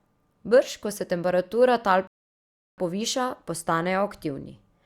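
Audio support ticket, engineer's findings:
Rebuffering stall, 2.07–2.78 s, after "ko se temperatura tal": playback buffer underrun, player starved of downloaded data and halted. Speech drops to silence for about 0.71 s, then resumes exactly where it stopped. No audio lost; roughly 0.7 s added to runtime.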